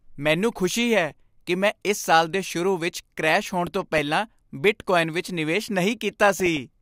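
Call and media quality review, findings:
DAB burbling at 1.11–1.16 s after "ਮੈਨੂੰ ਖੁਸ਼ੀ ਹੈ", 3.67–3.99 s after "ਵਿੱਚ ਕ੍ਰੈਸ਼ ਹੋਣ", and 6.28–6.60 s after "ਬਿਟਕੋਆਇਨ ਵਿੱਚ ਨਿਵੇਸ਼": short blips of noise over the speech. Weak-reception bit errors slip past error correction and corrupt MP2 scale factors, so single sub-bands jump in level. Unlike packet-loss dropouts, the signal never goes silent or repeats.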